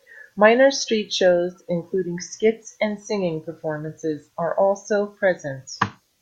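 Nothing stood out as a technical fault on listening to this speech recording.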